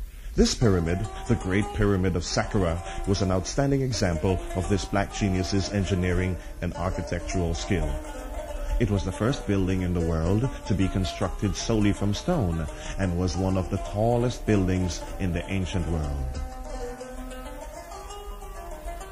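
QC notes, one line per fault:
Throughout: MP3 compression, plainly audible as a watery, swirling texture with metallic chirps on bright transients and smeared attacks, likely from an encoder short of bits, consistent with about 64 kbps. A spectrogram shows weak bands flickering on and off.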